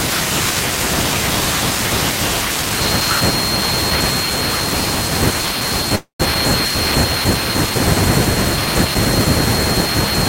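At 5.95–6.22 s, a call audio freeze: the last sound fades as a buzz or hiss into 120 ms of silence, likely a starved jitter buffer. Speech resumes 242 ms late with nothing lost.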